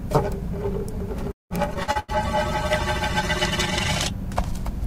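Everyday sounds. From 1.31 to 2.11 s, repeated packet loss (robotic sound) leaves five gaps, the longest 190 ms, with nearly half the span patched by stretched copies that appear as smeared, repetitive spectrogram blocks. From 1.89 to 4.78 s, a call bitrate drop makes the audio coarse and muffled, with the spectrogram's upper band cut away, consistent with a fall from 64 to about 20 kbps.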